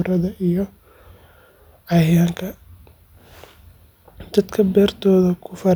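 A speech recording with nothing technically wrong with it.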